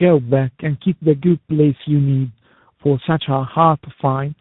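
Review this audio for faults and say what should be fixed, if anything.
Throughout, the speech sounds rough, muffled and warbly, with nothing above 3.8 kHz. That points to tandem speech coding: the audio seems to have been decoded and re-encoded across links, for instance a G.729A-style low-rate coder followed by CVSD, each coder working on the previous one's already degraded output. Prevent it by keeping one codec end to end or using codec pass-through at link borders.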